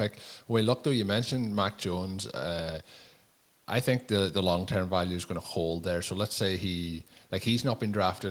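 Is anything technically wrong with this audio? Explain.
No, nothing technically wrong can be heard in this speech recording. There are no faults to report here.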